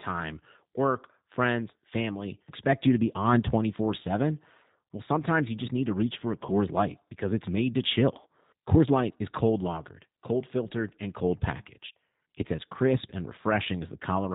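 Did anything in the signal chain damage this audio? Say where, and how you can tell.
Yes. The codec stage is at fault throughout: this is G.729 speech at 8 kbit/s, with plainly audible damage. Nothing above 4 kHz survives, and the voice has a rough, synthetic grain from the sparse pulse excitation. A simple low-pass filter would only dull the sound; this roughness comes from the codec's model.

The network stage adds VoIP packet loss concealed by the speech codec, from 6.47 to 6.54 s. About 20 ms is missing, which fits a single lost packet. There is no silent gap or click as in a plain dropout. The decoder stretches its last pitch and filter into a buzzy tone or coloured noise that fades, and the speech stays weak briefly after audio resumes.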